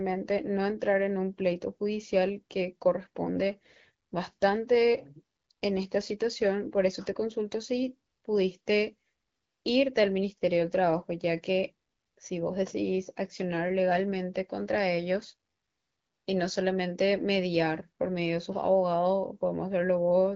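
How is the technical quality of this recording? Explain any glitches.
Nothing here glitches at all; the speech just has the lightly processed, phone-call character of an AMR wideband (HD Voice) link running at 12.65 kbit/s, which keeps it clear and easy to follow.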